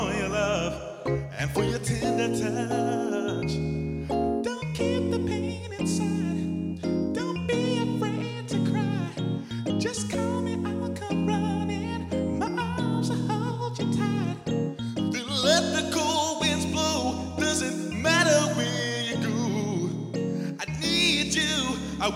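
Nothing in the audio points to a technical fault: the signal stays continuous for its whole duration, with no interruptions, distortion or sudden changes anywhere.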